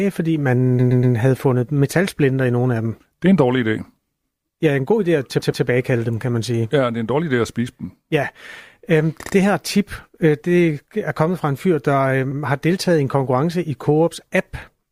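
A short stutter jumps the speech back and replays the same sliver of sound; this happens four times. At 0.79 s a 120 ms piece plays three extra times, to 1.15 s. After "en god idé at" a 120 ms piece repeats twice more (5.39 to 5.63 s) before "dem kan man sige". At 9.21 s a 60 ms piece repeats twice, just ahead of "her tip øh det". After "en fyr der øh" an 80 ms piece repeats once (12.31 to 12.39 s) before "har deltaget i en". These are repeated frames: a run of compressed frames was duplicated, so the decoder plays them again and the clip runs longer by each repeat.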